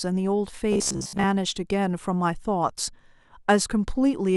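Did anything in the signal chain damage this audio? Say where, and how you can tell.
Yes. From 0.73 to 1.25 s the speech turns into robotic sound from repeated short buffers, a rigid metallic buzz at 66.8 Hz that loosely follows the words. That pitch fits a roughly 15 ms block replayed over most of the span, likely a driver or buffer underrun.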